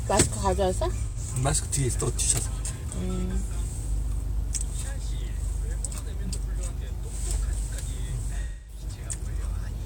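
Around 1.07 s there's AAC frame loss with concealment: an 85 ms gap, about two frames, patched from the last good spectrum, so it smears into a brief phasey blur. At 8.42 s a longer 256 ms loss decays toward silence before fading back by 8.82 s.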